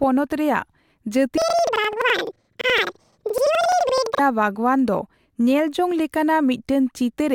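From 1.38 s to 4.27 s the speech jumps up an octave with a flutter, the sign of planar audio read as interleaved. Each 85.33 ms block plays twice at double speed, left then right, so pace holds while pitch rises 12 semitones, fluttering at 11.7 Hz.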